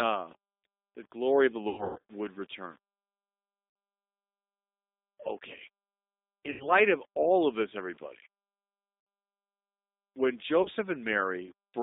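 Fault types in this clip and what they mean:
Low bit depth without dither: grainy distortion that follows the level, roughly 35 dB below the signal, likely from 8-bit rounding; the waveform shows stepped, quantised quiet passages.
G.729 codec: an 8 kbit/s VoIP codec leaves rough, synthetic-sounding speech; the spectrogram shows a band of roughly 200 Hz to 3.7 kHz, empty above.
VoIP packet loss concealed by the speech codec: gaps are filled with fading extrapolated sound, worst around 1.69 to 2.00 s, visible as smeared harmonics and decaying envelopes.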